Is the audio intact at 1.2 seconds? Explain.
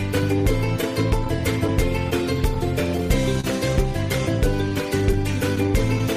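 No. The moment at 1.2 s falls inside a stretch of scattered short gaps that runs from 0.38 to 3.44 s. Around seven small holes in the stream were patched by carrying the previous sound forward, each gap about 30 ms at most and together about a tenth of a second. They come through as brief ticks or smears on otherwise clear audio. Unlike drift, these are confined to that window rather than running through the whole clip.

The same point is also affected by clock drift between sender and receiver, which is present throughout. The sender's clock runs roughly 2 percent slow, so the receiver's buffer keeps draining and it stretches or repeats small pieces. That yields small timing hiccups at uneven intervals from start to finish, not only inside the gap window.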